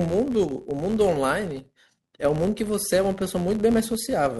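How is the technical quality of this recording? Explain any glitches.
The quality is compromised by one persistent fault. Filter restarted on every block, throughout: the filter drops its memory at each block boundary and restarts from silence, so each block opens with a small transient. Together these form a buzz at about 86 Hz, which fits a 512-sample block, and it rises and falls with the speech's level.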